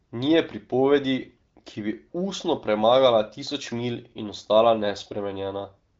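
Nothing stood out on listening to this speech, which carries the light, band-limited character of the AMR wideband (HD Voice) codec at 15.85 kbit/s, with nothing above about 7.6 kHz.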